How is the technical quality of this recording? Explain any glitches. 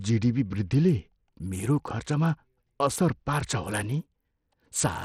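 The recording has one fault that runs through the whole clip. The speech is clearly degraded.

From start to finish the treble is missing above about 15.6 kHz, and what remains has a gritty, grainy edge with aliasing. This is likely Bluetooth SBC compression at a low bitrate, around 80 kbps. Its eight coarse sub-bands starve the top bands of bits and quantise the rest roughly.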